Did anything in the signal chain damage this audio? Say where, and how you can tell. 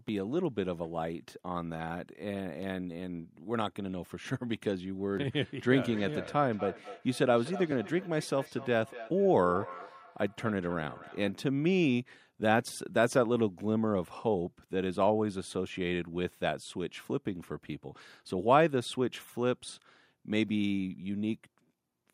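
Yes. Between 5.88 and 11.37 s the speech has a feedback echo between two devices, a call-processing fault: each word returns at a fixed interval of roughly a fifth of a second, thinner and more ringing on each pass, peaking at about -15 dB relative to the speech. Two devices in the same room share the call; one plays the other's microphone feed, which is re-captured, and neither echo canceller can remove audio its own device did not play.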